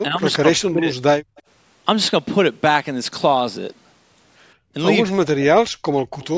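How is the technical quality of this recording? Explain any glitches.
The recording has three kinds of echo-canceller trouble, scattered through the six seconds.

Speech suppressed in double talk, at 0.09 to 0.22 s, 0.39 to 0.89 s and 5.03 to 5.69 s: the canceller likely heard both ends talking at once, could not tell the local voice from loudspeaker echo, and pulled the microphone down. The first dip is slight. The second cuts the voice very deeply for much of half a second. The third, around two thirds of a second long, drops it almost to nothing.

Background gated by the echo canceller, at 1.22 to 1.36 s and 4.55 to 4.73 s: while the far end's loudspeaker was playing, the canceller clamped the microphone hard, by about 23 dB and about 22 dB. The room tone briefly sinks out, leaving a short hole of near-silence for roughly 150 to 200 ms, then returns as the suppression releases.

Echo leak, at 1.36 to 1.42 s and 6.20 to 6.28 s: a loudspeaker's sound likely slipped past the canceller at one end and was sent back. 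It arrives as a faint, brief copy of the voice trailing 150 ms behind and sitting far below the main speech, heard as a short scrap. Throughout, the audio carries nothing above 8 kHz, consistent with normal call microphone processing.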